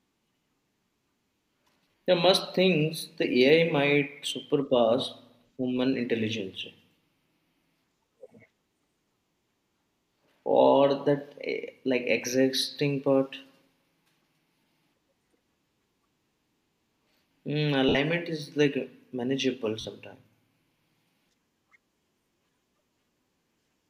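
Around 1.91 to 2.04 s, lost LE Audio frames leave about 100 ms of gaps scattered over 140 ms, the longest run roughly 40 ms. The LC3 decoder, likely at 64 kbps, reuses the previous spectrum with scrambled phases, so the sound turns into a brief grainy smear. The same happens for 60 ms at 17.89 s just before "is like manageable", and for 40 ms at 19.81 s just after it.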